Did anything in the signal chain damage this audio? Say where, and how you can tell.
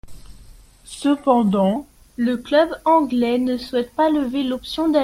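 Yes. A section at the wrong speed, likely a playback clock mismatch, plays 0.00–1.76 s at 0.852×, leaving the speech slower and about three semitones lower.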